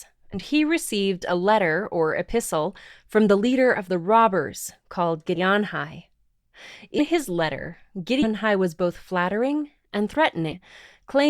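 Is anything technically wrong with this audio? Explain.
Yes, the speech has five spots where compressed frames were skipped: 0.33–0.36 s (just before "he received a letter"), 5.35–5.39 s, 6.98–7.01 s (right before "his letter"), 8.22–8.27 s (just after "his letter"), and 10.51–10.55 s. Whole decoder frames, which look like 10 ms each, never get played, so the audio jumps ahead by somewhere around 50 ms up to a couple of tenths of a second.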